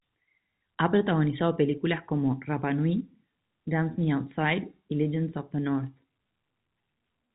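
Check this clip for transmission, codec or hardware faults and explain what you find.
No transmission, codec or hardware faults can be heard in the speech. It has the narrow sound of G.711 telephone coding, likely A-law at 64 kbps, with nothing above 4 kHz and at most a faint quantisation hiss that rises and falls with the level.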